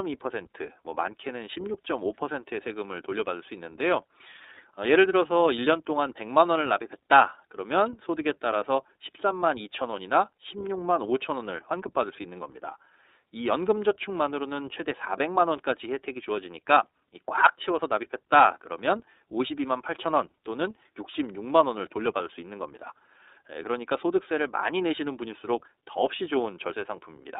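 Throughout, the speech carries iLBC codec coding: band-limited to 300 Hz–3.7 kHz, with a plainly rough, synthetic texture from independently coded 30 ms frames, which fits the 13.33 kbps mode.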